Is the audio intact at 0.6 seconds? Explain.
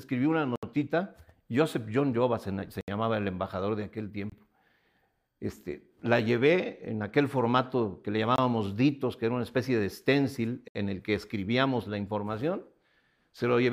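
No. From 0.56 to 0.63 s there is a block of digital silence lasting about 70 ms. The samples in that span were replaced by zeros, most likely because the output buffer was not filled in time. The sound cuts out abruptly and returns just as abruptly, with a short hole between. There is no fade, no residual noise floor and no smeared or repeated fill, which sets it apart from a faded dropout or a concealed packet loss.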